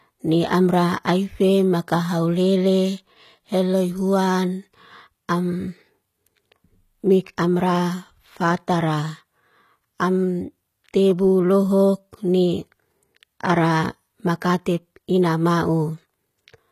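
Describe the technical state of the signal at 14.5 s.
At 14.5 s the speech carries HE-AAC compression damage, present throughout. The treble sounds gritty and lispy, with metallic s sounds, likely from spectral band replication at a bitrate near 20 kbps. On a spectrogram, the copied upper bands look smeared and patchy, and everything stops at about 14.9 kHz.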